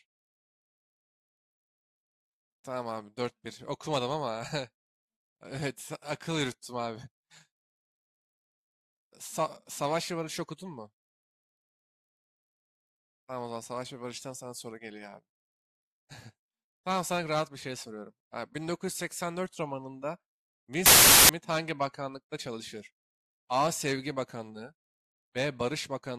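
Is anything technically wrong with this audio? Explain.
Yes. From 20.86 to 21.29 s the speech is swamped by a burst of loud, harsh broadband noise. These are samples built from the wrong bytes: each value was assembled from its bytes in the wrong way, so the rapidly changing low byte landed in the high position and turned into broadband hiss.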